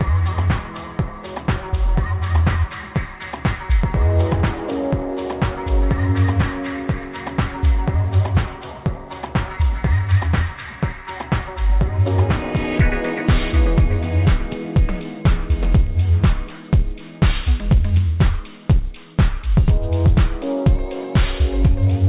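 Nothing stood out on listening; the sound carries the narrow band of a telephone-style call path, with nothing above about 4 kHz, which fits a G.711 mu-law connection at 64 kbps.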